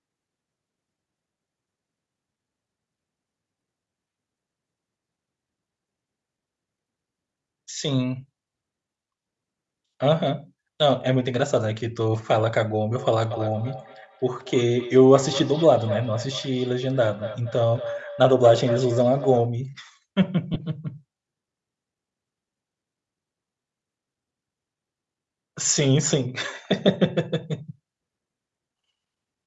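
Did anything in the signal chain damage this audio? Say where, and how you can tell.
Yes. Throughout the speech there is a breathy, grainy edge on the upper band, with noise standing in for detail. This is the codec stage, most likely Bluetooth LC3 compression, and the degree of damage fits a bitrate around 48 kbps with short 7.5 ms transform frames.

From 12.92 to 19.53 s each syllable returns roughly every fifth of a second, thinner and ringing, peaking about 12 dB below the speech. That is feedback echo between two devices: one device replays the other's sent audio into its microphone, and neither echo canceller removes it.

From 20.54 to 20.56 s there is a brief glitch where the sound should continue cleanly. These are lost LE Audio frames on the wireless link, about 15 ms, consistent with two 7.5 ms frames. The decoder covered the gap by reusing the previous spectrum with scrambled signs.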